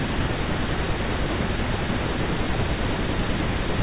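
No faults are audible in the speech, which carries the narrowband character of a G.711 mu-law call path with nothing above 4 kHz.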